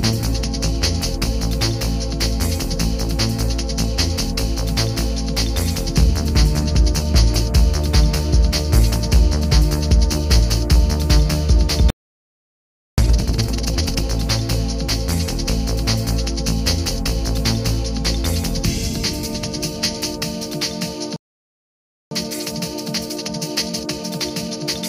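The player likely ran dry or was blocked twice, causing playback stalls: the audio cuts to silence from 11.90 to 12.98 s and from 21.16 to 22.11 s. Each time, time-compressed catch-up then trims the backlog by splicing out short pieces, so the sound hurries at unchanged pitch, at 2x from 12.98 to 14.04 s and at 1.25x from 22.11 s to the end.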